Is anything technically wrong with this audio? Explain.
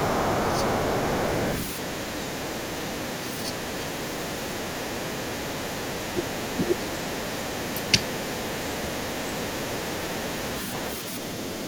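Yes. Two faults related to echo cancellation affect this speech clip.

The other side's voice leaks through from 0.0 to 6.09 s, from 6.45 to 10.91 s, and from 11.38 s to the end. It is faint, well below the main talker, and fades further after 6 s. The likely cause is loudspeaker playback reaching the microphone that the echo canceller did not fully remove. It sounds like a second voice, unlike reverberation, which only smears the talker's own speech.

The talker's speech is suppressed in double talk at 3.47–3.51 s, 6.13–6.89 s, 7.73–8.04 s, 8.79–8.94 s and 9.69–9.79 s. The first dip is slight, but the later ones drop hard, by about 20 to 30 dB. Both sides speaking at once likely led the canceller to duck everything. Unlike packet-loss dropouts, these gaps come while the other side is playing on the loudspeaker.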